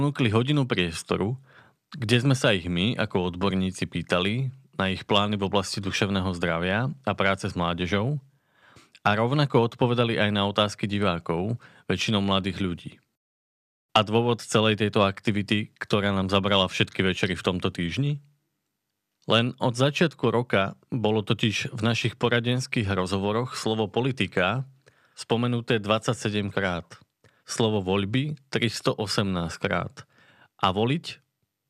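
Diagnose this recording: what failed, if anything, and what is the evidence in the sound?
Nothing failed; no fault is audible in this speech.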